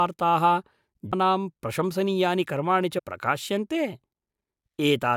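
At 1.12 s, and again from 2.97 to 3.00 s, the speech is interrupted by a short glitch, the sign of damaged data in a compressed stream. Corrupted bytes cause the decoder to misread a frame, lose sync and hunt for the next valid frame header, disrupting the sound for about 20 ms each time. On a spectrogram each appears as a narrow vertical disturbance. The waveform shows an abrupt discontinuity at each point.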